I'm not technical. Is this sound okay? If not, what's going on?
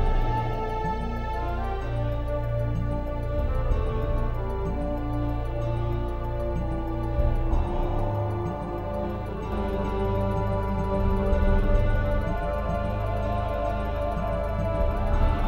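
No. From 9.52 s to the end, the audio has a doubled audio track: a second copy of the same sound plays alongside the first, trailing it by roughly 0.4 seconds and at about the same loudness. The copy starts abruptly and has no fading tail or room sound. The likely cause is the audio being picked up twice, once through a slower path, or an edit that left two misaligned copies in place.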